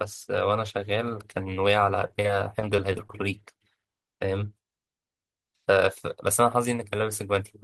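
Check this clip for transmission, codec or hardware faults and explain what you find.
There is one fault: repeated packet loss (robotic sound) from 2.07 to 3.18 s. More than a dozen short holes, none longer than 16 ms, are patched by stretching the preceding sound, covering about a seventh of that stretch. The speech turns choppy, with pieces missing. A spectrogram shows smeared, repeated frame-sized blocks.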